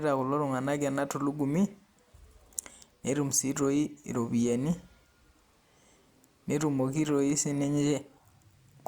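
Nothing stood out as a technical fault anywhere in the speech on listening.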